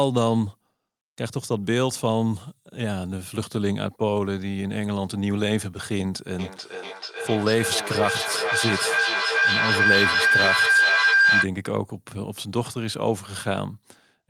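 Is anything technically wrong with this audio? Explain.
Yes, there is a feedback howl from 6.39 s to 11.5 s. Two devices sharing the call in one room form a loop in which each pass from loudspeaker back into microphone comes back louder. The loop narrows to a ringing tone around 1.5 kHz that repeats roughly every 400 ms and peaks about 5 dB above the speech. Unlike plain echo, whose repeats die away, these repeats grow until the loop is cut.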